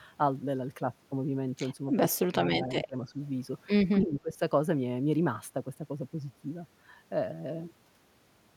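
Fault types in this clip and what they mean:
speech suppressed in double talk: With both ends talking, the echo canceller likely took this talker for loudspeaker echo and turned it down. The speech drops steeply, by about 30 dB, just after 2.2 s, then sags about 15 dB from 2.62 to 3.18 s and 3.96 to 4.4 s.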